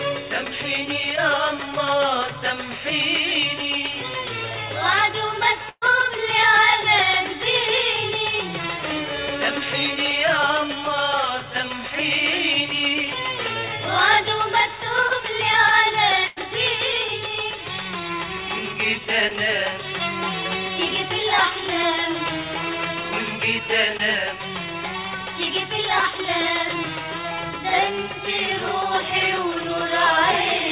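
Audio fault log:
1.16–1.19 s, 15.08–15.12 s, 19.28–19.32 s: short concealed packet loss. About 20 ms of audio never arrived each time. The receiver extended the preceding sound and then blended back in, giving a brief smear. On a spectrogram it shows as a short stretch of smoothed, repeated texture below the 4 kHz ceiling of the G.711 call path.
5.69–5.84 s: burst of packet loss. About 120 ms of audio is missing, bridged by 125 ms of concealment that continues the last sound while fading. The waveform tapers into about 40 ms of silence before the audio resumes further on.
16.26–16.38 s: burst of packet loss. About 100 ms of audio is gone, replaced by 100 ms of continued, decaying sound. The spectrogram shows smeared, repeated harmonics or hiss, then an abrupt jump forward in content.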